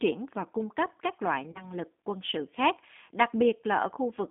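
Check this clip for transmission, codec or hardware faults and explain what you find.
Two faults can be heard: a G.729 codec colouring the whole clip, and one patch of VoIP packet loss concealed by the speech codec.

The G.729 codec affects the entire speech clip. The encoder keeps only a vocal tract filter, a pitch predictor and a few pulses per frame, which fits a G.729A stream at 8 kbit/s, so the voice comes through intelligible but rough and faintly synthetic. The line carries only about 200 Hz to 3.6 kHz. On a spectrogram, energy stops flat near 3.6 kHz, with a sparse floor below 200 Hz.

The VoIP packet loss concealed by the speech codec runs from 1.52 to 1.72 s, between "cung cấp các loại" and "lực quân sự khác". About 30 ms of audio went missing, which fits a single lost packet. The decoder extended its last pitch and filter at falling gain, and each following frame was rebuilt from that guess, so the voice sounds stretched and thinned for roughly 0.2 s. 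On the waveform, the gap shows as a smooth, repetitive, decaying stretch. On the spectrogram, it appears as frozen harmonics.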